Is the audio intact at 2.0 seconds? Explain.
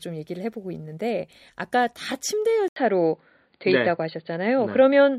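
Yes, at 2.0 seconds the audio is intact, with no fault audible at that moment.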